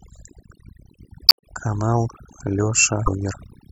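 Overdone noise removal runs through the whole speech clip. A noise reduction stage was pushed too hard. It cuts individual frequency bands whenever they sit near its noise estimate. Quiet parts of the voice are caught and removed along with the noise. The background drops and breaks up into twinkling specks.

Damaged data in a compressed stream breaks in twice, from 1.26 to 1.44 s and from 3.03 to 3.08 s. Part of the encoded stream is corrupt there. The decoder misreads those frames and loses sync. It must hunt for the next valid frame header before playback settles. Each break is heard as a short garbled chirp or blip. The first lasts nearly a fifth of a second. The second is a brief flick of about 50 ms.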